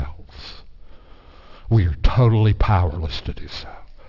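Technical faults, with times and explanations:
Throughout: aliasing. The speech appears to have been resampled down to about 12 kHz without an anti-alias filter, so content above 6 kHz folds back below it. Sibilants turn gritty and metallic, with spurious tones roughly 25 dB under the speech running up to the 6 kHz band edge.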